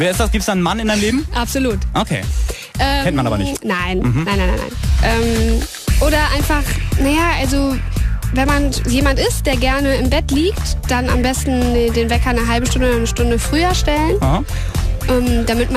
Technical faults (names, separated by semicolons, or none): DAB burbling